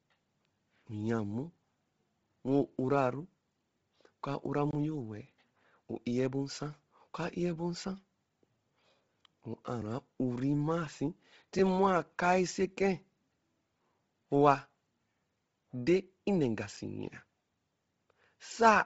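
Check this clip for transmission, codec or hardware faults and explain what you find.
Two faults are present: codec damage across the whole recording and three brief dropouts to digital silence.

Bluetooth LC3 compression, throughout: a low-bitrate transform codec, likely LC3 at around 24 kbps in 7.5 ms frames, strips everything above 7.7 kHz and leaves the speech breathy and grainy.

Blocks of digital silence, at 4.71 to 4.73 s, 9.81 s and 16.77 s: the output buffer most likely went unfilled and was zeroed, with the longest gap fitting a 1024-sample buffer and the last a 256-sample one. The first sounds like a short hole and the others like ticks.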